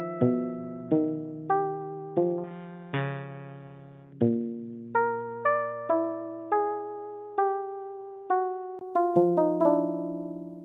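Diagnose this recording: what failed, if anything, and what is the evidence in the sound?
From the start to 8.81 s the audio is band-limited, with nothing above 3.6 kHz, giving a dull, boxy tone. A 20 ms gap at 8.81 s precedes full bandwidth. This is likely an input switched to a poorer device at the driver stage, with similar level and a faint added noise floor.

At 6.67 s a short stall from a late packet holds the sound for 24 ms, until 6.72 s, with nothing lost. The jitter buffer ran dry on the network path, and the receiver stretched the last sound, adding 24 ms of delay.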